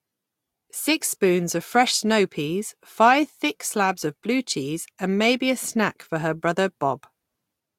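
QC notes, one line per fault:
No faults were heard in the speech. There is nothing to log for this clip.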